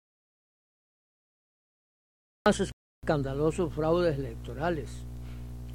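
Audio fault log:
0.00–2.46 s, audio dropout to silence: The clip opens in dead silence that's already going when it starts, with no room tone or noise floor at all, until the sound comes in abruptly at 2.46 s. That silent gap most likely means the input was lost, say a device disconnect, a dropped link or a stray mute, while the recorder kept writing silence, so whatever happened during those first two and a half seconds is simply gone.
2.72–3.03 s, rebuffering stall: Shortly after the sound gets going, it halts into silence for 0.31 s and then picks up exactly where it left off, with nothing skipped. That's the player running dry on downloaded audio and waiting for more to arrive before carrying on. Unlike the opening gap, no material is lost here. The stall just inserts about 310 ms of extra time, which you hear as a brief hitch in the flow.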